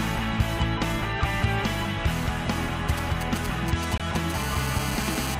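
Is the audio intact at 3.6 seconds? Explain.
No. From 2.89 to 4.32 s a galloping dit-dit-dit of short buzzes at about 217 Hz sits roughly 10 dB below the sound. These are GSM signalling bursts: a nearby 2G phone's radio bursts are rectified by the audio circuit and heard as buzzes.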